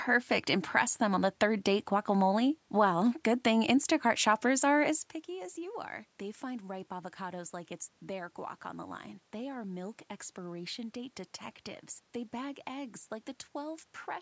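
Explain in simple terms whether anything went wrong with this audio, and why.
Nothing went wrong here: the change in level around 5 s is just the talker moving relative to the microphone, the background noise belongs to the room, and the lack of anything above 8 kHz along with the trimmed lowest bass is normal call microphone processing.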